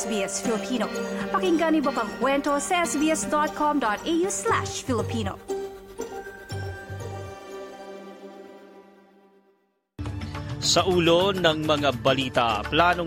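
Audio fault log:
No faults found; nothing audible anywhere in the clip calls for an entry.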